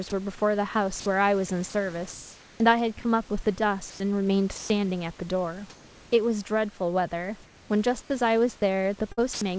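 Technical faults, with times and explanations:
0.10–0.12 s, 1.00–1.06 s, 1.70–1.74 s, 3.90–4.00 s, 4.58–4.70 s, sound dropped by the voice detector: the sender likely mistook quiet speech for background, so brief gaps of 20 to 120 ms give way to steady synthetic noise.
7.44–7.70 s and 8.02–8.10 s, comfort noise in place of the background: transmission paused during silence, likely, so the real room background becomes featureless synthetic hiss, about 2 dB and about 9 dB quieter respectively.
9.12–9.41 s, sound chopped by the voice detector: sending likely switched on and off repeatedly, replacing about 134 ms of speech with comfort noise, so the ending sounds choppy.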